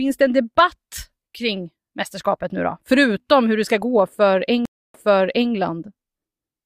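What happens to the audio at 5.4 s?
At 5.4 s the sound is still inside a stream reconnect that runs from about 4.65 to 5.52 s. The audio drops out for roughly 0.29 s, then comes back softly and repeats material it has already played, jumping back about 0.58 s. The connection broke, the player fell silent, reconnected, and started a fresh decoder mid-stream. The server resent a burst of earlier audio, so playback picks up from a point already heard, with its first frame faded in.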